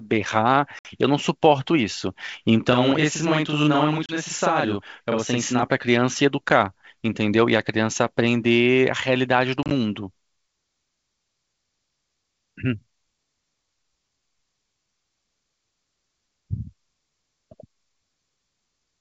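Speech carried over a G.722 wideband call, with clear bandwidth up to about 7 kHz and little coding hiss, which points to the full 64 kbit/s mode. The clip has four instances of packet loss on an ADPCM call. They fall at 0.79–0.86 s (60 ms lost, several packets), 4.06–4.13 s (30 ms), 6.49–6.51 s (10 ms, a single packet), and 9.63–9.72 s (50 ms scattered over 80 ms, longest run 30 ms). Each appears as an abrupt silent gap. Because ADPCM's predictor and step size adapt from previous samples, the receiver's state no longer matches the sender's when audio resumes. The returning speech comes back slightly distorted for some tens of milliseconds until it reconverges. From 2.73 to 5.63 s there is channel delay (doubling). One channel runs 40 ms behind the other, and summing them to mono produces an equal-level slap or doubled image rather than a clean single source.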